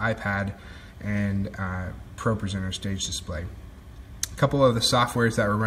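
No technical faults can be heard anywhere in this audio.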